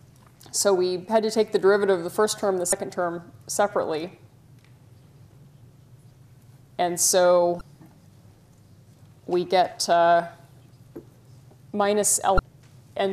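At 2.69–2.73 s, 7.58–7.61 s and 12.36–12.39 s, damaged data in a compressed stream makes the decoder lose frame sync, giving brief chirps, squawks, clicks or short holes that appear as short broadband smears or waveform discontinuities.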